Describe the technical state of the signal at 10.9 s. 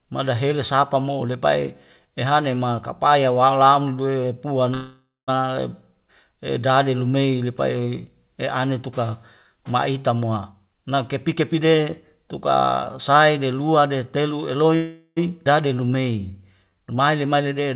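At 10.9 s you're inside a jitter buffer speed-up running from 10.53 to 12.50 s. The receiver had too much audio queued, so it kept snipping out short pitch-period chunks, around 0.4 s in total. The speech plays about 21% fast at unchanged pitch and sounds rushed.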